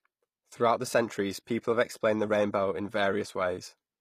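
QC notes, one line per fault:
Throughout: HE-AAC compression. The speech has plainly audible codec damage: s sounds come out gritty and lispy, and the treble is synthetic, with nothing at all above 14.9 kHz. The likely cause is HE-AAC coding at a low rate, fitting roughly 24 kbps. Only the lower spectrum is coded directly. The upper band is rebuilt from copied lower bands under a coarse envelope, so its harmonics fail to line up across the crossover.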